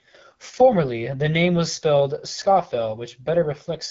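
Throughout, AMR wideband (HD Voice) coding roughens the speech audibly. The raspy texture fits a low rate near 8.85 kbit/s. Nothing remains above 7.4 kHz.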